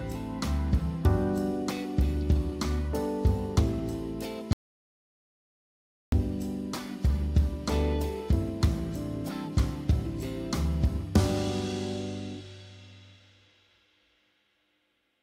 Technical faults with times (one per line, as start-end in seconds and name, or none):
4.53-6.12 audio dropout to silence